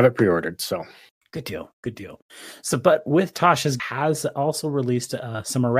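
At 3.79 s the speech jumps ahead with a small blip, likely a stream segment skipped: one piece of the segmented stream failed to load and playback resumed at the next. The waveform shows a sudden envelope discontinuity; the spectrogram, a thin vertical broadband line.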